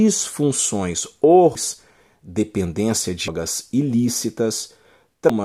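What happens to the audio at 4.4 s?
At 4.4 s the speech carries on cleanly, with nothing breaking into the sound at that moment.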